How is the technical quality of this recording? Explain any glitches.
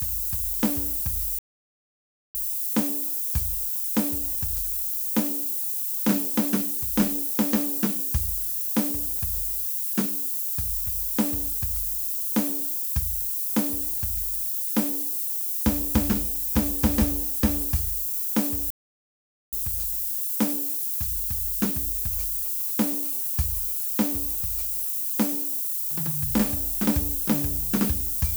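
The technical quality is poor: the music is buried in heavy hiss throughout, drops out twice, and picks up mobile-phone interference near the end.

Low bit depth with noise shaping runs through the whole piece. The music appears quantised to about 5 bits, with the rounding error fed back and pushed toward high frequencies. The result is a steady, thin hiss roughly as loud as the music itself, climbing steeply toward the top of the band. This differs from plain broadband noise, which would sound even across the spectrum.

Playback stalls occur from 1.39 to 2.35 s (about 0.96 s) and from 18.70 to 19.53 s (about 0.82 s). The music stops dead mid-flow and then resumes. The likely cause is the player running out of buffered data or its thread being blocked. The silence is clean, with no repeated fragments of the kind that concealed packet loss produces.

GSM signalling bursts appear from 22.13 to 22.94 s. 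A nearby 2G phone sent short groups of radio pulses, and the audio circuitry rectified them. The result is a galloping dit-dit-dit of brief 217 Hz buzzes, well below the music at around 20 dB down. Its broken rhythm separates it from the continuous call buzz that follows.

GSM phone buzz runs from 23.03 to 25.42 s, when the phone settled into a call and transmitted at its 217 Hz burst rate continuously. Rectification produces a hard, raspy 217 Hz buzz rich in harmonics, about 30 dB below the music. It is steady, unlike the stuttering signalling pattern, and unrelated to the music, unlike mains hum at 50 or 60 Hz.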